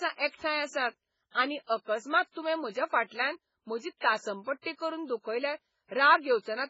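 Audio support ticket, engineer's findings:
Speech, whole clip: watery, swirly texture, s sounds gone chirpy and metallic, attacks smeared, top end dead flat above 7.7 kHz. Likely cause is heavy MP3 compression, consistent with something around 16 kbps. Starved encoder chops the treble at a fixed cutoff and drops weak frequency lines, which flicker on and off frame to frame, hence the swirl. Needs a higher-bitrate source.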